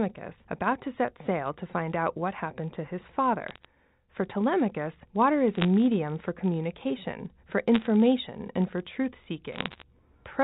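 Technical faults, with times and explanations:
Throughout, filter restarted on every block: a steady buzz at 50 Hz runs under the speech, rising and falling with its level. A filter here clears its internal state at each block boundary and begins again from silence, so every block opens with a small step before the filter settles. Those repeated steps fuse into a buzz at the block rate, which points to blocks of about 20 ms. The buzz grows with louder passages and fades with quieter ones because each transient scales with the signal entering the filter.
3.48–3.65 s, 5.55–5.65 s, 7.74–7.87 s and 9.53–9.83 s, bit errors on a digital phone line: short bursts of sharp ticks and crackle sit over speech that otherwise passes unchanged. The bursts fall just after "what happened to his", between "water is" and "for communication for", just after "for communication for", and near the end. On this G.711 mu-law telephone path, whose narrow band is audible throughout, a flipped bit alters a single 8-bit sample. 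A flip in the sign or a high-order bit throws that sample far off and produces a click. At an error rate well under one percent, these scattered hits sound like crackle, and the longest burst, near the end, is the densest.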